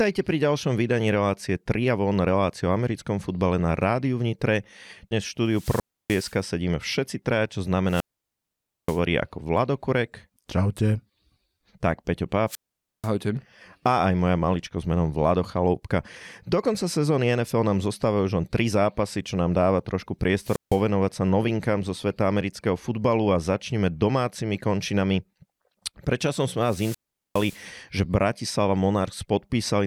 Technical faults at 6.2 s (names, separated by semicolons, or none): wireless microphone squelch dropout